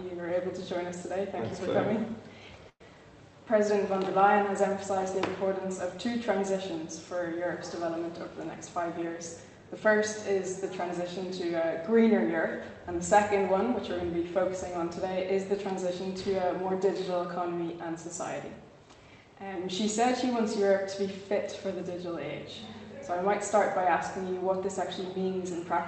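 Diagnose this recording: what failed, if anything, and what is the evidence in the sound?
Network stage, likely a call audio freeze from late packets. At 2.69 s a fading buzz or hiss fills 109 ms, ending in 40 ms of silence.

Buffer stage, jitter buffer speed-up, 8.56 to 9.86 s. Pitch periods are dropped, about a tenth of a second in total. Sound runs at 108% speed, same pitch.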